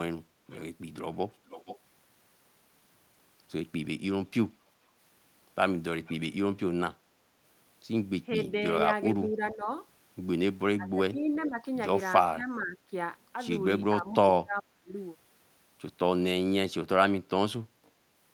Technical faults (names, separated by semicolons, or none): echo leak; speech suppressed in double talk